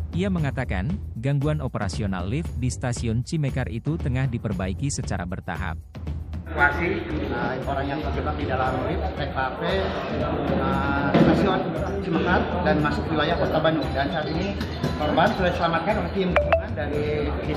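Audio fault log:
No faults detected in this clip.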